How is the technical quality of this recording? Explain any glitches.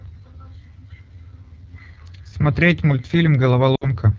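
The technical quality is poor: the speech is plainly degraded by low-rate coding throughout, and there is one short dropout near the end.

The AMR wideband (HD Voice) codec damage runs across the whole clip. The speech sounds rough and raspy, which fits AMR-WB's low 8.85 kbit/s mode. At that rate the pulse-driven vocal tract model lacks the bits for accurate excitation. On a spectrogram, harmonics look smeared below 6.4 kHz, with a uniform noise-like band from 6.4 to 7 kHz.

Lost AMR speech frames occur from 3.75 to 3.90 s. About 60 ms of speech is missing, which fits three 20 ms frames failing their checksum. The decoder repeated the last pitch and vocal tract settings while reducing gain, so the sound fades to near silence within two frames, then returns weak or rough for a moment. On the waveform this appears as a tapering envelope dip. On the spectrogram it shows as frozen, fading harmonics.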